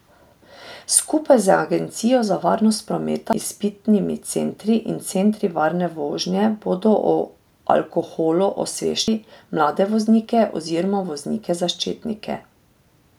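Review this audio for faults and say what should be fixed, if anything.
The speech skips at 3.33 s, between "za varnost" and "izpitnimi centri in centri", and again at 9.08 s. Each skip drops roughly a third of a second, and the two sides are butted together with no gap. This is audio missing between chunks. The spacing likely comes from a recorder handing off 6-second blocks and losing audio at each changeover. To prevent it, buffer continuously or overlap consecutive blocks so nothing is discarded at the boundary.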